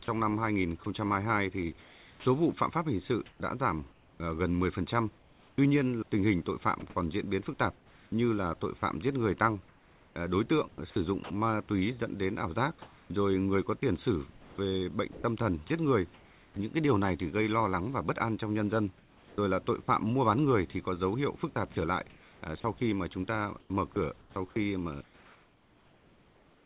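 Sound chopped by the voice detector runs from 0.04 to 11.3 s, 12.82 to 16.56 s, 18.98 to 19.88 s and 21.54 s to the end. Quiet stretches of speech give way to comfort noise, about 2.5, 1.1, 0.5 and 2.3 s in total, likely from the sender's detector gating, so the speech sounds choppy.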